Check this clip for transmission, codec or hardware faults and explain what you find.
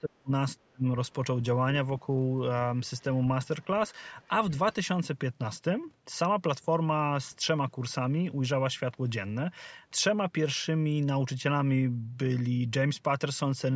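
Two kinds of fault turn up, both in the first few seconds of this speech clip.

Speech suppressed in double talk occurs from 0.00 to 0.31 s and again from 0.61 to 0.85 s. The talker's level collapses by about 35 dB in the first gap and about 40 dB in the second. Each dropout lasts a few hundred milliseconds. The likely cause is the other party talking at the same moment. The echo canceller could not tell near speech from loudspeaker echo, so it pushed everything down.

The other side's voice leaking through appears briefly from 4.22 to 4.28 s. It is a faint scrap of a second voice, about 40 dB below the talker. It is short and very quiet. The likely cause is loudspeaker sound reaching the microphone and getting past the echo canceller. The call's microphone path cuts everything above 8 kHz.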